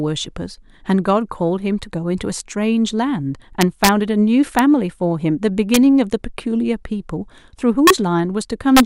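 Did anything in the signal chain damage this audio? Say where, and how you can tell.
Yes. Integer overflow in a fixed-point gain or format-conversion stage wraps speech peaks to the opposite sign. Violent cracks occur at 3.61–3.89 s, 4.59, 5.74–5.77, 7.87–7.90 and 8.77–8.80 s. The waveform shows peaks flipping rail-to-rail, and the spectrogram shows full-band vertical streaks.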